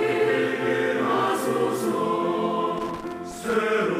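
From about 2.78 s to 3.56 s the sound breaks into an irregular burst of crackle and scratching, with the signal cutting in and out in rapid, uneven fragments for roughly 0.8 s. This is loose connector crackle: a worn or dirty contact somewhere in the cable path was making and losing connection as it shifted, chopping the audio on and off, while any DC present on the line added pops.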